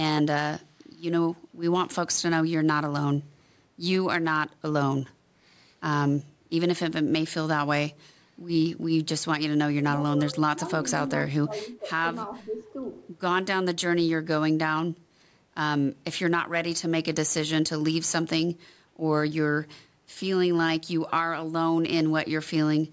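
At 0.80 to 0.86 s a very faint delayed copy of the speech surfaces, trailing the original by 465 ms. This is likely an echo leak from a loudspeaker whose echo canceller let a scrap through. The clear lag and the much quieter level set it apart from room reverberation.

Between 9.74 and 12.75 s the speech repeatedly dips, at 9.74 to 10.03, 10.32 to 10.62, 11.25 to 11.91 and 12.43 to 12.75 s. The drops are deep, about 25 dB, in the first two and shallower, about 10 and 5 dB, in the last two. These dips point to speech suppressed in double talk, likely from an echo canceller ducking this talker while the far side spoke.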